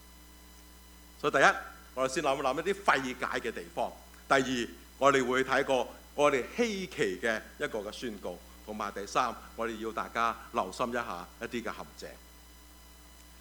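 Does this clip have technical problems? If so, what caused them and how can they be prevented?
No, nothing in this audio points to a technical fault, so there is no cause to trace and nothing to prevent.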